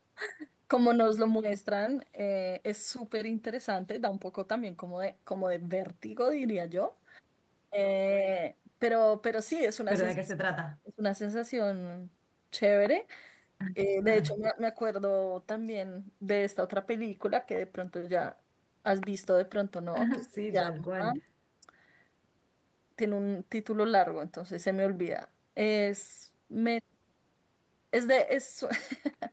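From 10.14 to 11.02 s the speech sinks sharply, by roughly 25 dB at its deepest, then recovers. It dips again more gently at 13.86 to 14.05 s and 14.28 to 14.6 s. This is likely speech suppressed in double talk: with both sides talking, the echo canceller turned the talker down along with the echo.

Inside that third dip, at 14.42 to 14.49 s, a faint ghost of the sound appears about 208 ms late and about 20 dB below the speech. It is likely an echo leak, where the far end's loudspeaker pickup slipped past its echo canceller and came back.

The deepest cut comes at 20.16 to 21.27 s, where the speech almost vanishes for about a second, falling by roughly 30 dB. It is the same double-talk suppression, with the canceller clamping down hard while the other side spoke.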